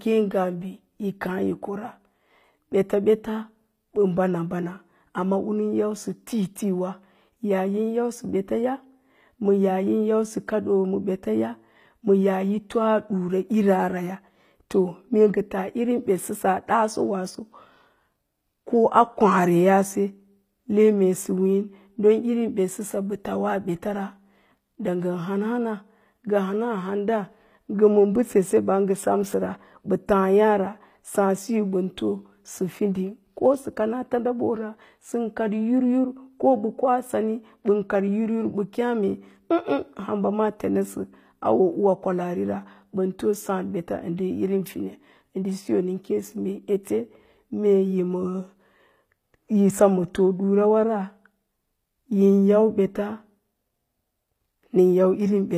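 Throughout, the speech was likely coded with HE-AAC compression, its treble rebuilt from copied lower bands. The s sounds turn gritty and metallic, with nothing above 15.5 kHz.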